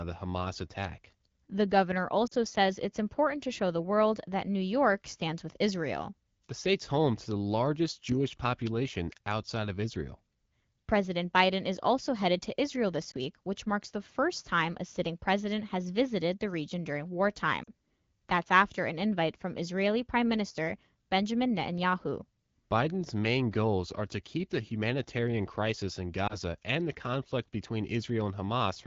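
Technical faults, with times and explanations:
2.28–2.34 s (before "says it's important to"), 13.11–13.16 s (before "week which marks the"), 17.64–17.71 s (after "visited the region during") and 26.27–26.37 s: lost AMR speech frames. The decoder bridges each gap of about 20 to 40 ms, fitting one or two missing frames, by repeating the last good pitch and spectral shape at falling gain. This is heard as a brief warble or dip. On a spectrogram the harmonics smear flat and fade. On the waveform the envelope sags before the speech recovers.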